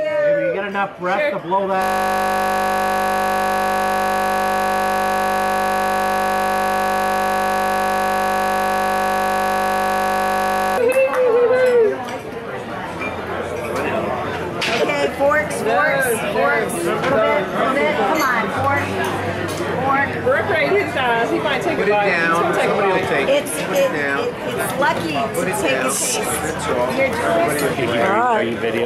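From 1.82 to 10.78 s the sound collapses into a steady 50 Hz buzz: a system hang loop, with the hardware replaying one 20 ms buffer hundreds of times while the system froze.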